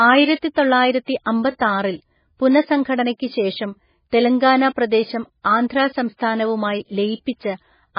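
Throughout the speech, everything above 5.1 kHz is gone, and what remains sounds watery and swirly, with weak detail flickering in and out. That flicker sets it apart from plain filtering and points to heavy MP3 compression, likely at a very low bitrate around 16 kbps.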